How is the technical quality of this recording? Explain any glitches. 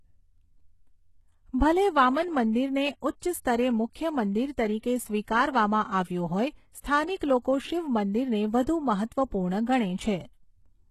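The speech recording has plainly audible codec damage throughout and one brief pre-echo. Throughout, the treble sounds synthetic, with sibilants gritty and nothing above 12.3 kHz. This is likely HE-AAC compression at a very low bitrate, around 16 kbps, rebuilding the highs from copied lower bands; band-limited MP3 would sound dull rather than metallic. From 6.81 to 6.84 s, pre-echo puts a short 37 ms hiss before an attack, as block-wide quantisation noise leaks ahead. That is unlike a click, which is a single sharp spike.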